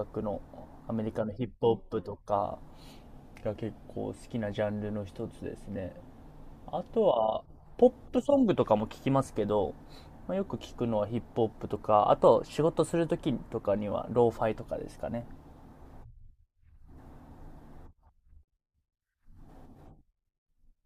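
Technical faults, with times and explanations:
2.99–3.97 s: drift correction step. The speech slows by 5.6% and drops 99 cents, nearly a semitone, then snaps back, likely a clock-matching resampler refilling its buffer.
12.25–13.52 s: drift correction step. The speech runs 5.6% fast and rises about 94 cents before returning to normal, likely the same resampler stepping its rate to drain its buffer.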